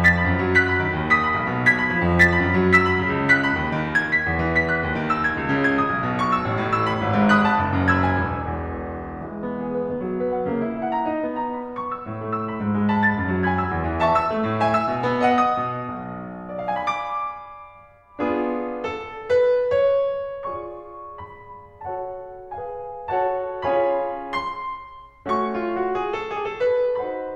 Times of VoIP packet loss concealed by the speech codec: none

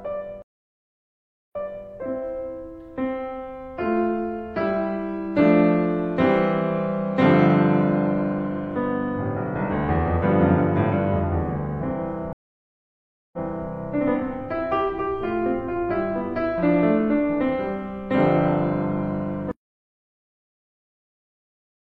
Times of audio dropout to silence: 19.51-21.86

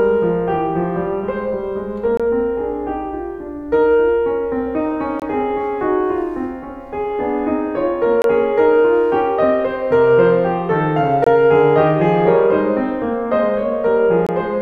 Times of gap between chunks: 2.17-2.20, 5.20-5.22, 8.22-8.24, 11.24-11.27, 14.27-14.29

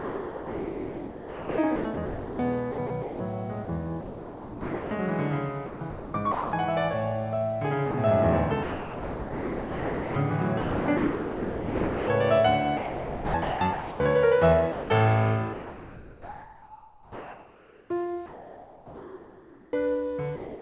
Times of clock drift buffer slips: none

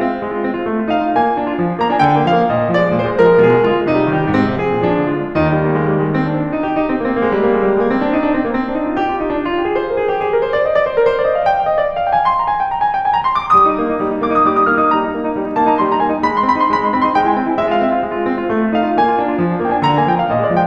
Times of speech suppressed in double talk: none

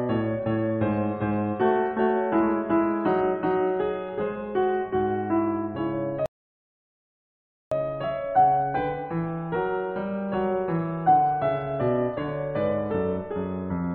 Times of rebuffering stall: 6.26-7.71

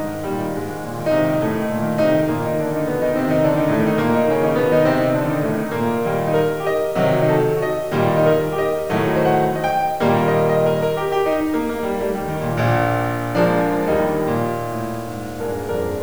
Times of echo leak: none

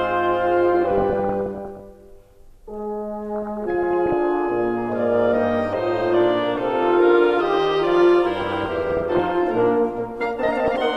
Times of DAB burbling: 0.85-1.81, 3.35-4.13, 8.37-9.32, 10.42-10.76

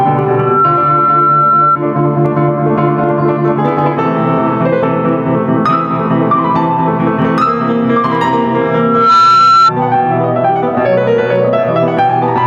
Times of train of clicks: none

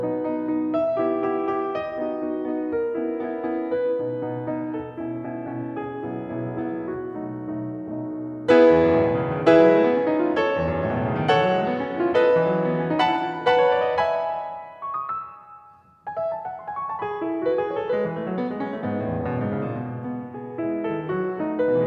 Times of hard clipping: none

